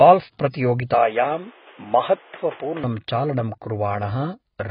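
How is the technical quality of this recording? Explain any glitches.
The quality's pretty rough: the whole thing is heavily compressed, and for a stretch in the middle it drops to an even narrower, duller sound.

The AAC compression runs the full length, likely a low-bitrate AAC-LC encode, with heavy damage that fits something around 16 kbps. At that rate the encoder spends its few bits on the strongest parts of the spectrum and discards the top entirely. Nothing comes through above 5.2 kHz, so the speech sounds muffled and smeared, with a watery, fizzy edge on sibilants.

From 0.94 to 2.84 s it sounds like the input switched to a poorer device, likely a different mic or a headset profile. There's no gap at the switch and the level stays about the same, but the band narrows further, with nothing above 3.8 kHz, giving a boxier, phone-like tone. The other device also brings its own background noise, sitting roughly 30 dB below the speech, until the brighter sound returns at 2.84 s.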